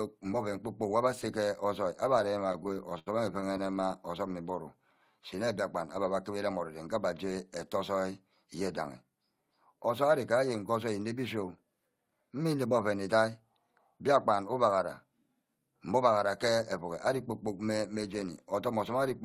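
From 2.47 to 3.92 s the speech catches and drags in a rapid series of small hitches, each a brief sustain of the sound just before it. These are repeated stalls (stutter). Packets reached the receiver late or too slowly, so its jitter buffer kept running dry, fifteen times across this span. Each time, the last sound was stretched out to cover the wait, the longest for 76 ms. About 242 ms was filled this way, roughly 17% of the span, and nothing was lost.

Between 4.28 and 5.46 s the speech becomes slower, at about 89% of normal speed, with sounds drawn out but the pitch unchanged. This is a jitter buffer slow-down. With the buffer running short, the receiver repeated single pitch periods and slivers of pauses many times in a row, adding 134 ms of audio to rebuild its reserve.

From 7.97 to 8.61 s, and again from 14.65 to 15.05 s, the speech briefly sounds hurried while keeping its pitch, at about 107% and 109% speed. 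Both are jitter buffer speed-ups. The buffer held more audio than its target, so the receiver trimmed short pieces of one or a few pitch periods in quick succession. Each time, about 50 ms was removed to bring the delay back down.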